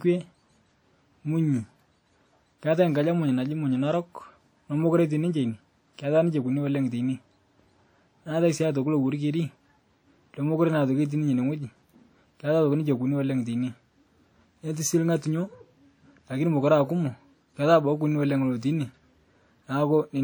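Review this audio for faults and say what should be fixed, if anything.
WMA compression, throughout the speech: the sound is plainly damaged, ringing and washy, with a hiss that swells and fades along with the signal. A transform codec of this kind, likely WMA at a low rate that fits around 48 kbps, spreads its quantisation noise across long blocks of tens of milliseconds and zeroes weak spectral lines. The band still reaches about 20.1 kHz, so the harm lies in the detail, not in lost treble. To prevent it, keep a lossless or high-bitrate master and encode at a higher bitrate or with a better codec.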